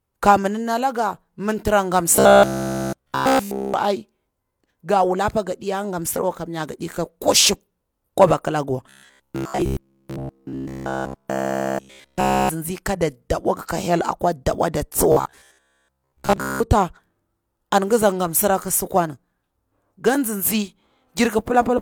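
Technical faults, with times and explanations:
2.16 to 3.80 s, 8.90 to 12.49 s and 15.12 to 16.60 s, robotic sound from repeated short buffers: new audio is likely arriving too seldom, so the playback keeps looping a fragment of about 15 ms instead of fresh material. That loop imposes a fixed buzz at 66.8 Hz, turning the speech into a rigid, metallic drone that only loosely tracks the words. In the first two stretches the whole span is repeated material; in the third, most of it is.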